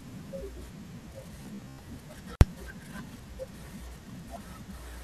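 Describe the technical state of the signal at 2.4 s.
An intermittent contact fault runs from 2.34 to 2.41 s, right across the moment asked about. A loose plug or cable connection briefly loses contact, breaking the signal path for about 56 ms. The speech drops out abruptly instead of fading, with a crackle where contact breaks and again where it returns. While the line is open, faint hiss remains, so the gap sounds like a short, scratchy hole in the audio.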